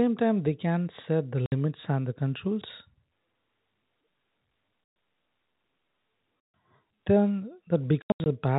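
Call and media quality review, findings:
Speech dropouts: hard-edged holes of dead silence at 1.46 to 1.52 s (60 ms), 4.84 to 4.96 s (120 ms), 6.49 to 6.54 s (140 ms). Burst at 8.02 to 8.26 s: 180 ms lost across 240 ms, longest gap 80 ms. Packet loss filled with silence. Receiver inserts silence for missing packets without concealment. Gap lengths are multiples of 20 ms, which fits 20 ms packets. Narrowband G.711 telephone coding underneath, coding damage none or faint.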